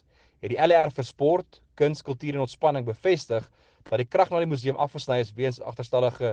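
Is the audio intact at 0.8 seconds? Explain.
No, there's a short concealed packet loss from about 0.79 to 0.86 s. Roughly 40 ms of audio arrived too late, so the receiver stretched the preceding sound to cover the gap and then blended back in. You hear it as a quick smear or wobble.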